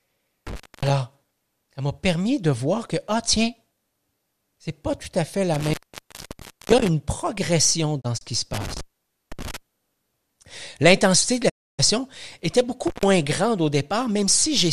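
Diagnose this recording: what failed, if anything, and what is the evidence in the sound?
Intermittent contact in the analogue wiring: a loose plug opens at 0.47–0.90 s, 5.54–6.88 s, 8.54–9.57 s after "qui se", and 12.87–13.05 s before "grande au". The gaps last 0.27 s, 0.96 s, 0.51 s and 0.13 s, with crackle at each edge and faint hiss underneath. That residual noise is what separates it from a digital mute.

Digital broadcast dropout at the receiver: at 8.00–8.23 s, just before "qui se", two holes of about 24 ms each are scattered across 192 ms, which fits two lost frames. At 11.48–11.81 s, about 288 ms is lost. Both gaps fade over 20 ms into clean silence with no crackle or hiss.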